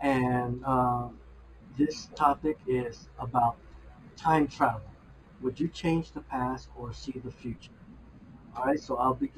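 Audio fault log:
throughout: imaging from linear upsampling. The sound points to an 11 kHz source raised to 48 kHz by joining samples with straight lines, so the top end is dulled and faint mirror images sit roughly 30 dB down, the first between 5.5 and 11 kHz, giving sibilants a light metallic shimmer.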